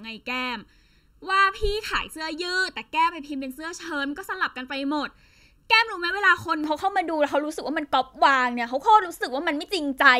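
From the start to 6.64 s, one channel runs slightly late, by about 0.7 ms, and is summed with the other to mono: channel delay, producing comb filtering. Because the common material arrives twice with that small offset, it cancels at evenly spaced frequencies, with the first notch somewhere around 700 Hz and more stacked above it. The speech sounds hollow and phasey.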